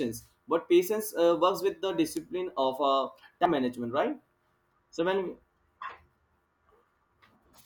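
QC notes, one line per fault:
2.17–2.64 s, corrupt FLAC frame: Just after "works with the", the speech is disturbed by decoding errors peaking at about −19 dBFS. Flipped bits inside the compressed data were decoded without the checksum catching them, so the predictor rebuilt each sample from wrong values, and the error carried forward to the end of the damaged frame. The disturbance lasts nearly half a second, which points to several consecutive frames being hit, before clean frames resume.
3.46–3.54 s, compressed frames skipped: The speech jumps forward, losing roughly a tenth of a second of audio. Whole compressed frames were never played, either absent from the stream or discarded by the decoder as damaged, so playback resumed a frame-length multiple further on. Because lossless frames do not overlap, the join is a hard click, and the missing stretch is heard as a stumble in the speech.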